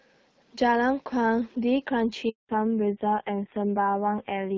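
At 2.29 s the call is passed from one network to another, and during that handover gap no speech frames get through. The speech fades out within a few tens of milliseconds and stays silent for 200 ms, until the new link picks up at 2.49 s. Whatever was said in that stretch is gone.

From 2.49 s to the end, there is a fallback to narrowband: the connection leaves the HD Voice codec, whose light coding texture before the gap fits AMR-WB at around 12.65 kbit/s, for a low-rate narrowband codec, likely AMR-NB at about 5.9 kbit/s. Nothing above 4 kHz remains, so the speech sounds noticeably duller and rougher.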